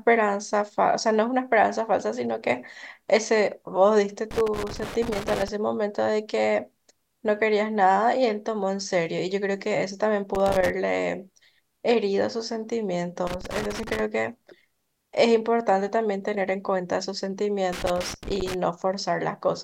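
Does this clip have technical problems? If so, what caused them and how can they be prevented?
Yes. A worn or dirty connector is briefly losing and regaining contact, chopping the speech into irregular bursts of loose connector crackle at 4.31–5.48, 10.35–10.70, 13.27–14.00 and 17.73–18.54 s. Cleaning or replacing the connector and securing the cable against movement prevents it.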